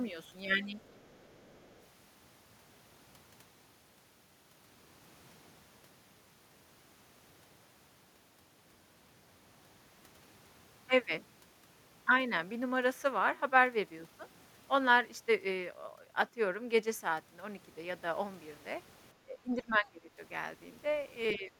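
From 0.8 to 1.84 s there's a faint second voice behind the talker: the other side's voice leaking through. It sits way down, roughly 35 dB under the main speech. It's likely the far end playing out of the talker's loudspeaker and getting back into the mic, with the echo canceller not quite scrubbing all of it out.

Near the end you get speech suppressed in double talk, twice: 19.25 to 20.19 s, then again from 21.35 s right to the end at 21.59 s. The talker's level sags, down by something like 20 dB at worst, for about 0.7 s in the first spot and about a third of a second in the second. That's likely both sides talking at once, with the echo canceller unable to separate the talker from the echo and ducking everything together.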